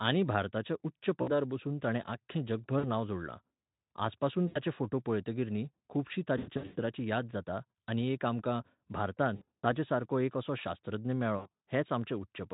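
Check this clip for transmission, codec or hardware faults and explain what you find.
One kind of fault runs through this speech clip: repeated packet loss.

VoIP packet loss concealed by the speech codec occurs at 1.21–1.31, 2.79–2.85, 4.48–4.58, 6.37–6.80, 9.35–9.75 and 11.37–11.48 s. During each gap in the packet stream, the decoder extrapolates from its last pitch and spectral filter while lowering the gain. The missing stretches become buzzy or noisy, fading smears. The last three bursts are scattered, with runs of up to 120 ms, so the sound stays weakened through them.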